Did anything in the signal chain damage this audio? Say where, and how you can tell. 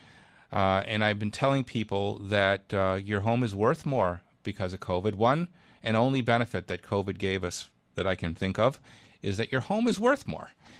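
Yes. At the network stage, lost packets were replaced by the low-bitrate copies carried in later ones: a lost packet rebuilt from error correction. There is no gap, but the sound turns rougher and noisier at 0.81–0.83 s, 2.39–2.45 s, 3.81–4.03 s (after "uh your home is") and 9.87–9.89 s.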